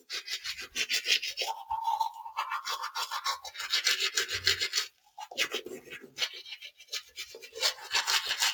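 A speech noise suppressor was left running on these sounds, treating steady and fading parts as noise, so the level pumps and thins by around 10 dB throughout. The sound cut by the noise suppressor sinks at 3.39–3.58 s (about 11 dB), 4.87–5.24 s (about 17 dB), 5.83–6.19 s (about 10 dB) and 6.63–7.56 s (about 17 dB), with sustained parts and tails dropping away.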